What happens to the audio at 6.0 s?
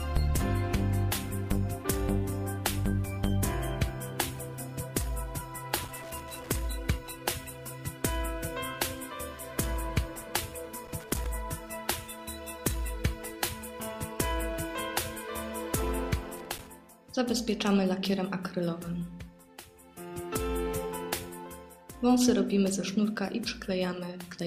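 At 6.0 s the audio sits inside a burst of loose connector crackle that runs from 5.77 to 6.51 s, about three quarters of a second. A worn or dirty contact in the signal path is shifting, so the connection flickers open and shut many times. The signal gets chopped into fragments. The result is a ragged, irregular scratching crackle laid over the sound.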